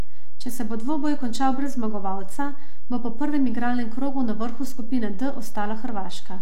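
Across the whole speech recording there is nothing to hear directly, but a DC offset shifts the entire waveform away from zero by a constant amount. That wastes headroom and leaves steady energy at the very bottom of the spectrum.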